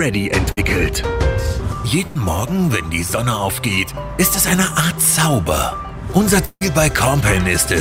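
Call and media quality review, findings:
Burst of packet loss, 0.51–0.59 s and 2.07–2.17 s: jitter buffer/PLC stretching the last frame into a fading buzz or hiss, about 55 ms then 81 ms, before the sound picks up again. Roughly 60 ms and 80 ms of audio just gone.

Short concealed packet loss, 3.75–3.79 s: quick smear where the decoder's concealment papered over a 20 ms hole, extrapolating the previous sound and crossfading back. Small, but something brief could get swallowed there.

Long network dropout, 6.45–6.63 s: sound carries on as a decaying buzz/hiss across about 158 ms of fill, the last roughly 50 ms of it dead air, resuming with about 160 ms missing. Likely a network-side outage, with the receiver's concealment running out before packets returned.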